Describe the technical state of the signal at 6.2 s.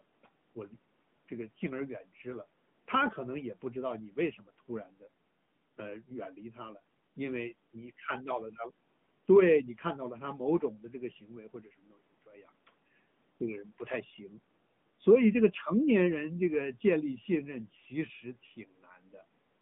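At 6.2 s, as throughout the clip, the speech is running through the AMR narrowband mobile codec. It rebuilds the voice from a vocal-tract model on 20 ms frames within a 150 Hz to 3.5 kHz line band, giving a thin, plainly buzzy, synthetic tone that fits a mid bitrate near 10 kbps.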